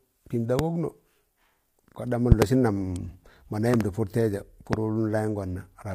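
From start to finish the speech has the rough, grainy texture of low-delay AAC compression, likely AAC-ELD at a low rate, something around 32 kbps. At that rate the coarse coding leaves noise between the pitch harmonics, and nothing comes through above 15.6 kHz.

Then there's a loud pop at 0.59 to 0.62 s, a double pop at 2.32 to 2.44 s, another double at 3.74 to 3.83 s and a single one at 4.73 to 4.76 s, each around 20 to 25 dB above the speech, which carries on underneath. They're likely voltage spikes from a plug, switch or static.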